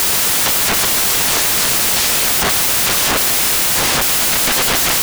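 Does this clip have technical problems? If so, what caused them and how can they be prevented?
Yes. Throughout, the reader assembled samples from the wrong bytes, so noisy low bits became each value's large part, turning this speech into loud, harsh broadband noise. Prevent it by declaring and checking byte order, sample width and alignment wherever the raw data is read.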